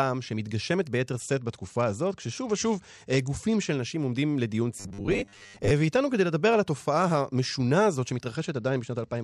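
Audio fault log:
1.12–3.70 s and 8.36–9.23 s, Bluetooth SBC bit pool drop. The speech suddenly loses its treble and takes on a gritty, grainy noise. The top sub-bands are starved of bits and the rest are coarsely quantised. The sound points to a fall from a bit pool near 31 to about 11, roughly 83 kbps.
4.80–5.71 s, robotic sound from repeated short buffers. The speech becomes a rigid metallic buzz at 100 Hz that still loosely tracks the words. This is likely caused by late audio being padded with repeats of a 10 ms buffer, with about half the sound made of repeats.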